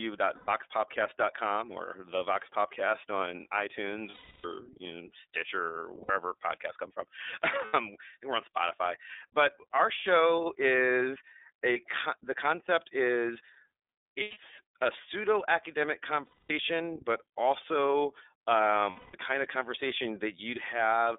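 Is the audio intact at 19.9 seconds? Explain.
No. At 19.9 s, as throughout the clip, the speech has passed through the iLBC codec, and the sound fits its 13.33 kbps mode with 30 ms frames. Each frame's excitation is coded on its own, without support from the frame before, so the voice comes out slightly rough and synthetic, with plainly audible codec damage. The line band runs only from about 300 Hz to 3.6 kHz, which strips the lowest warmth and all the upper clarity.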